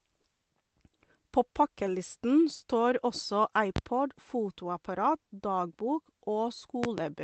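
A speech clip with two loud pops standing about 20 dB above the voice: a single sharp pop at 3.76–3.80 s, just after "pakkelisten står også", and a double pop from 6.84 to 7.02 s. The likely cause is a voltage spike from a plug, switch or static discharge.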